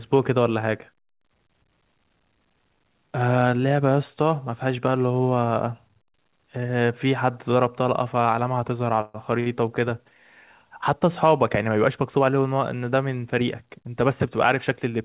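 A call audio freeze runs from 9.01 to 9.16 s. For about 131 ms the last sound is held on as a fading buzz or hiss, and then the speech resumes from where it stopped with nothing lost. The cause is likely delayed packets draining the jitter buffer, which inserts that gap and adds the same delay.

A short stall from a late packet follows from 9.40 to 9.48 s. One packet missed its playout time, so the receiver stretched the preceding sound by about 59 ms until it arrived. The result is a briefly prolonged sound with a slight buzz or dip, and no speech goes missing.

A jitter buffer speed-up occurs from 13.41 to 13.88 s. With surplus audio queued, the receiver trimmed repeated pitch-period slices, a few tens of milliseconds in total, to pull the delay back down. The speech runs at about 107% of normal speed at unchanged pitch and sounds hurried, against the narrowband call sound with nothing above 4 kHz, consistent with a G.711 A-law path at 64 kbps.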